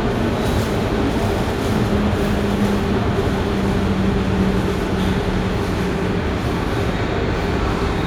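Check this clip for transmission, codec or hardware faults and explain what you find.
No faults turn up anywhere in the audio. Nothing heard in the recording points to a problem introduced along the way.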